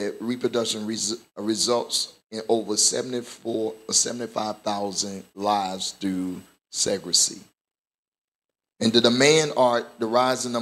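Nothing here goes wrong technically; there's no glitch, dropout or distortion anywhere along the way to point to.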